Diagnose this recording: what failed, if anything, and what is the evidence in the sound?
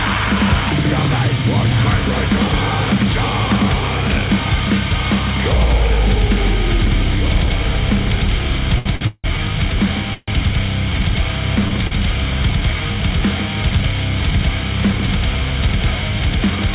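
A doubled audio track runs through the whole clip: a second, full-band copy follows about two seconds behind, roughly 10 dB quieter. It has no decay or room colour, unlike an echo or reverb tail. This likely comes from a second capture path or an edit holding two copies out of step.

Short stalls from a late packet occur at 8.78, 8.95, 11.68 and 11.87 s. Each is a jitter-buffer underrun where the receiver held the last sound for 74, 56, 31 and 40 ms, with a faint buzz or dip, then resumed where it stopped. There is no silence, which separates these stalls from a freeze.

Call audio freezes at 9.07 to 9.26 s and 10.14 to 10.30 s are longer waits at the network and jitter-buffer stage. The held sound turns to a fading buzz or hiss and drops to silence for about 40 and 30 ms before the audio continues from the same point, likely because packets were held up in transit. All of this sits within a narrowband call path with nothing above 4 kHz, which fits G.711 at 64 kbps.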